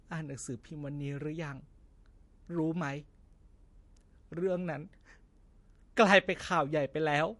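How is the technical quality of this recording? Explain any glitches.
The recording carries plainly audible compression damage from start to finish. The speech sounds watery and swirly, s sounds pick up a metallic chirp, consonant attacks are smeared, and nothing reaches above 11.3 kHz. The cause is likely MP3 compression, and the degree of damage fits a low bitrate of around 48 kbps. Starved of bits, the encoder cut the treble at a fixed frequency and dropped weak frequency lines, which flicker on and off from frame to frame.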